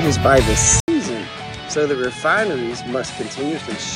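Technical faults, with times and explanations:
0.8 s to the end: input switched to a poorer device. After a brief gap of about 80 ms, the sound comes back duller and noticeably quieter, dropping by around 10 dB, with nothing left above 10.5 kHz and a faint new background noise sitting well beneath it. This is likely the recording moving mid-take to a different, narrower-band input, whose own frequency limit, gain and noise floor replace those of the original device.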